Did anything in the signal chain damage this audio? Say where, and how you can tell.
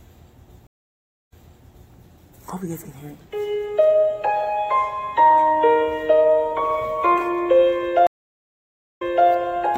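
Yes, at the network stage: two stream reconnects. From 0.67 to 1.93 s the audio goes silent for 0.63 s, then resumes about 0.63 s earlier than where it broke off. From 8.07 to 9.28 s a 0.90 s silence is followed by a jump back of 0.31 s. The connection dropped, the player reconnected and the server resent a burst, so a freshly started decoder replays material and fades in. A plain dropout would not repeat audio.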